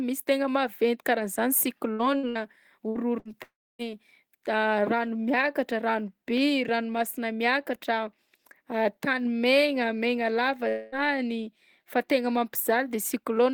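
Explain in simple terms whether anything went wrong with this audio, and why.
Short runs of network packets were lost in a burst of packet loss at 1.93, 2.17, 2.29, 2.89 and 3.19 s. Each time about 60 ms of speech vanishes, briefly replaced by a fading buzz or hiss.

Two longer gaps follow, most likely a long network dropout. At 3.43 to 3.82 s the held sound fades to silence, and at 10.69 to 10.95 s a fading buzz or hiss covers the missing quarter-second.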